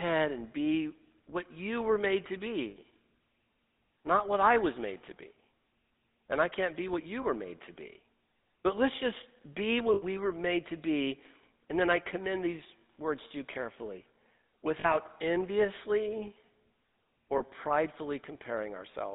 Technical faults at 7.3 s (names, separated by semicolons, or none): GSM full-rate codec; lost GSM frames